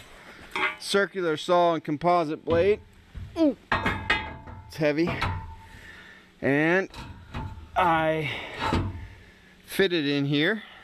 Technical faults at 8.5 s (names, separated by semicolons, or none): none